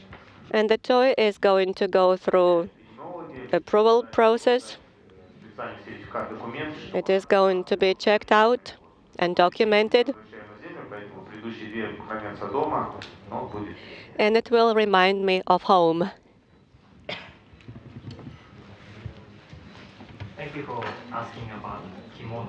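No technical faults are audible.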